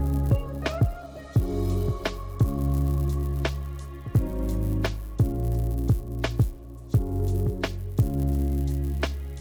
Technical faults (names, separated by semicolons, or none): resampler restarted on every block